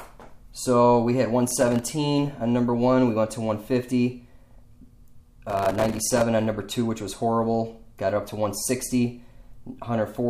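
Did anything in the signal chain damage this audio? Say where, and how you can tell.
Yes, there is processor overload crackle at the driver/buffer stage, in two bursts: 1.47 to 1.87 s and 5.50 to 6.22 s, the second lasting roughly twice as long. Within each burst the audio is repeatedly cut by very short silent gaps with hard edges, each gap fitting a buffer of around 1.5 ms. The processor kept missing its deadline for each small buffer, and every miss left silence, so the rapid string of dropouts is heard as gritty crackle riding on the sound. It stops once the load eases.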